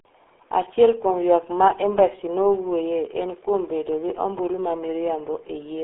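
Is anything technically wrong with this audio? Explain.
Yes. Throughout the speech, the sound carries the damage of the RealAudio 14.4 codec, the old dial-up speech coder. It fits a rate of about 8 kbit/s, squeezing the signal into a line band of roughly 300 Hz to 3.5 kHz, with nothing above 3.8 kHz. The heavy coding leaves speech muffled and gargly. A plain telephone-band filter would sound narrow but clean, whereas this adds a bubbling, smeared roughness to every syllable.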